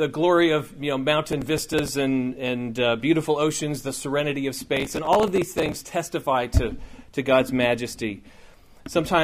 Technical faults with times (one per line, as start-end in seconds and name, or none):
1.32-1.88 processor overload crackle
4.77-5.80 processor overload crackle